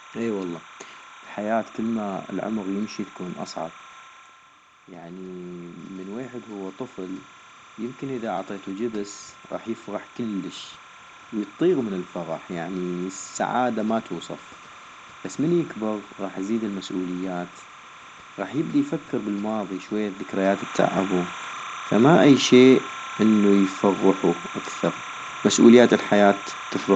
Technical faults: timecode bleed; automatic gain rising

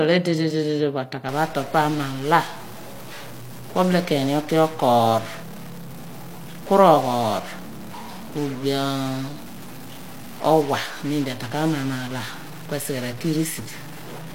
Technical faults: stuck bit

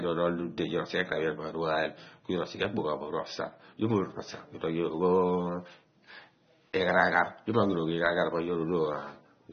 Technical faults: AAC compression

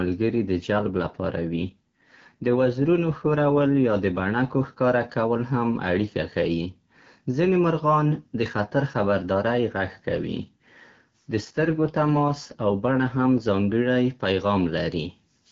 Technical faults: AMR rate drop

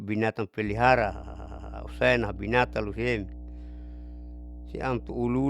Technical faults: mains hum; repeated frames

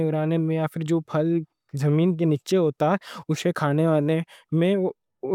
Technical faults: none

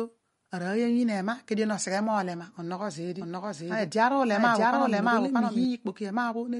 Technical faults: MP3 compression; doubled audio track

